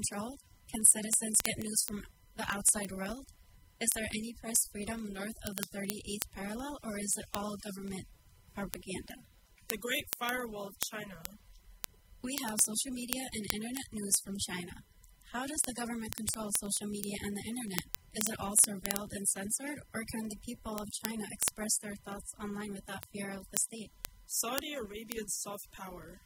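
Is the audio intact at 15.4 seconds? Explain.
No. Word clock ticks run from 0.12 s to 26.24 s, so 15.4 s is affected. The receiver's clock is not locked to the sender's and drifts by roughly 400 ppm. Each slip drops or repeats a sample, giving sharp ticks about every 0.05 s.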